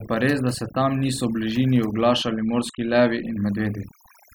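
Speech with overdone noise removal throughout: between phrases the background drops to near silence dotted with twinkling specks. On a spectrogram the gaps appear almost empty apart from scattered isolated bright dots, while quiet parts of the voice show holes where bands were pulled down with the noise.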